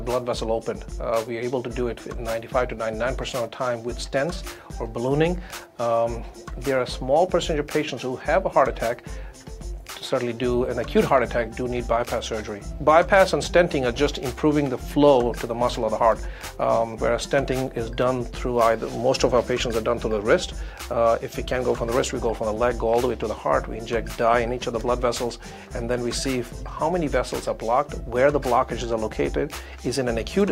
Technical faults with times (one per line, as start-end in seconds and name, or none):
none